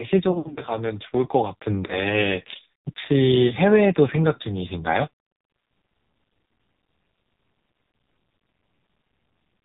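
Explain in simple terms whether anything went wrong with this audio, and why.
AMR narrowband mobile codec, heard across the whole clip: the speech has been squeezed through the low-quality 2G/3G phone codec used on mobile calls. Everything above 4 kHz is cut off, so the voice sounds muffled and thin. The codec rebuilds speech from a simple model of the mouth and throat using very little data, which makes this voice sound heavily buzzy and artificial.

Lost AMR speech frames occur at 0.32 to 0.61 s, 1.86 to 2.01 s, 3.48 to 3.54 s, 6.72 s and 9.28 s. Radio errors corrupted small chunks of the call, so the phone guessed the missing sound by repeating the last good one, more quietly each time. The first stretch is the worst: about 160 ms is missing, scattered across 240 ms, with the longest gap around 80 ms. There the speech smears and dips. The later ones are brief warbles or dropouts.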